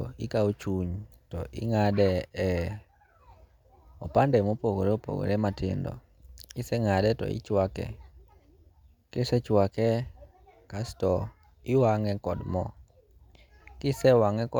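Nothing in this bit of speech catches the ear as a technical fault, so there's nothing to flag here.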